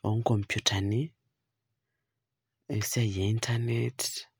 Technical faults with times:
none

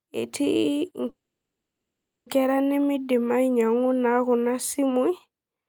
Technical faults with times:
1.09-2.28 call audio freeze

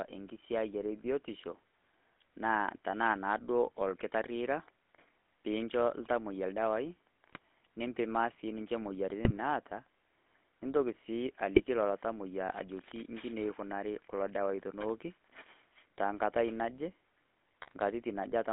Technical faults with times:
0.00-18.52 GSM full-rate codec
7.29-7.38 GSM bit errors
9.24-9.31 GSM bit errors
11.55-11.64 GSM bit errors
17.62-17.73 GSM bit errors

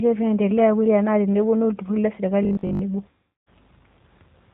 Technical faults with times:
0.00-4.53 G.729 codec
2.43-2.81 robotic sound from repeated short buffers
3.09-3.49 VoIP packet loss concealed by the speech codec

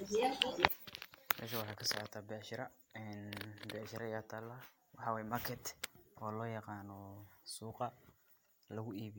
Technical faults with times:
0.68-9.19 one channel inverted

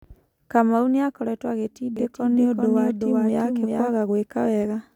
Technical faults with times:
1.97-3.91 doubled audio track

